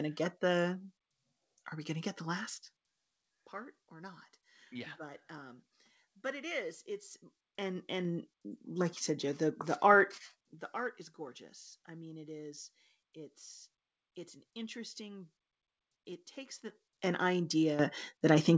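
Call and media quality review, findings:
Zipper noise, 7.08–8.24 s: ticking under the speech as level ramps in 2 dB steps, roughly 15 dB total, about seven a second. Unsmoothed gain stage, per-buffer updates.

Mic volume stepped up at 17.79 s: speech and background jump about 10 dB together. Call software's auto input gain bumping the device level in one go.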